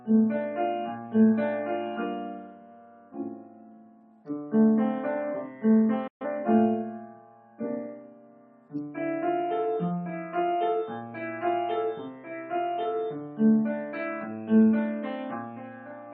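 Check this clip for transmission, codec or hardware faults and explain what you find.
One fault is present, a digital broadcast dropout. From 6.07 to 6.26 s the receiver lost about 128 ms of programme, likely three corrupted frames. It muted with a quick 8 ms fade and resumed later in the programme. Unlike packet-loss concealment, nothing fills the hole.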